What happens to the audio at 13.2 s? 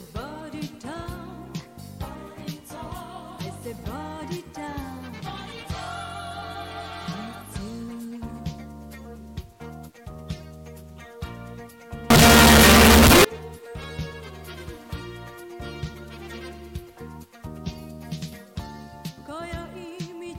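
At 13.2 s you're right at the tail end of a burst of signed and unsigned mixed up, running from about 12.10 to 13.25 s. It sounds like a blast of very loud, harsh distortion in which the quiet parts are as loud as everything else. The likely cause is the 8-bit samples being read with the wrong sign convention, which flips the top bit so every zero crossing jumps across the full range.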